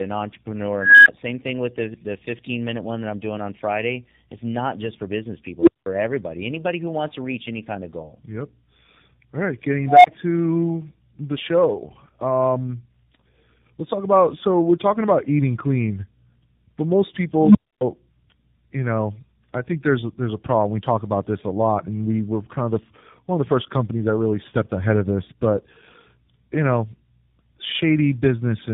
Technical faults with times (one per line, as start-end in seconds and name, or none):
0.00-28.73 tandem speech coding
0.77-1.08 unstable filter
5.60-5.86 unstable filter
9.86-10.07 unstable filter
17.38-17.81 unstable filter